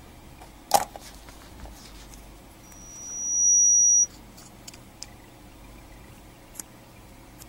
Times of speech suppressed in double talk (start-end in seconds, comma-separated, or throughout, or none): none